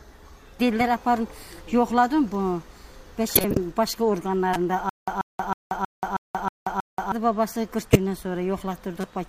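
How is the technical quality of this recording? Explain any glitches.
The recording has two kinds of technical fault, both from playback or transmission rather than the source.

Corrupt frame decoded: damaged compressed frames were decoded anyway, putting energy at wrong frequencies. The result is brief chirp-like noise bursts at 3.35–3.57 s (spanning several frames), 4.53–4.56 s, 7.92–7.96 s and 9.01–9.04 s.

Stutter with silent gaps: from 4.89 to 7.12 s the stream likely stalled and replayed its last fragment at each retry. A 136 ms burst repeats seven times every 318 ms, separated by 182 ms of digital silence, and the audio that should have played there is lost.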